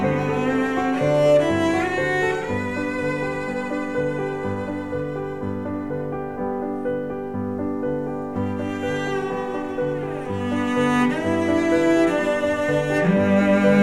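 Nothing here stands out as a technical problem; the audio simply runs along with no dropouts, glitches or other faults to point to.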